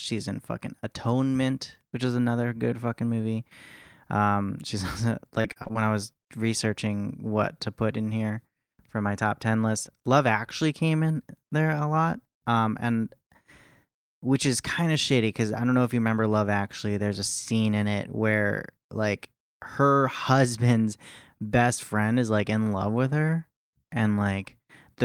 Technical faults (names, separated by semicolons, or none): repeated packet loss (robotic sound); short concealed packet loss